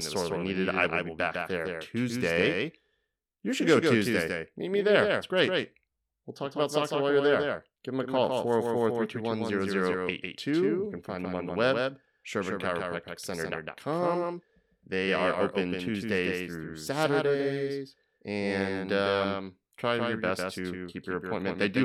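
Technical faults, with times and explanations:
Throughout, doubled audio track: the speech is mixed in twice, with a second full-band copy trailing the original by roughly 150 ms and sitting maybe 5 dB lower. That gap is too long to fuse into one sound, so every syllable gets a crisp slapback. It's dry, with no decay or room colour, so it doesn't read as reverb. Likely cause is the same feed being picked up a second time through a slower path and summed back in.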